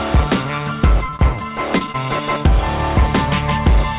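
From 1.06 to 1.42 s the sound turns choppy and robotic, with four short dropouts, the longest about 27 ms, patched over. This is repeated packet loss. Audio kept arriving late or not at all, and each hole was filled by extending the preceding sound, so roughly a fifth of that stretch is synthetic fill.

Shortly after come two brief smears, from 1.78 to 1.83 s and from 1.92 to 1.96 s, each a small wobble where the sound blurs for a moment. Both are short concealed packet loss. About 20 ms of audio failed to reach the decoder each time, and the receiver bridged the gap by continuing the last sound before blending back in. Throughout the clip the call path's band limit is audible, with nothing above 4 kHz.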